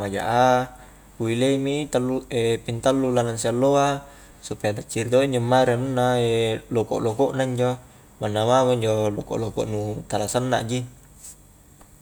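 Nothing technically wrong turns up anywhere in this speech recording, so there are no times or causes to point to.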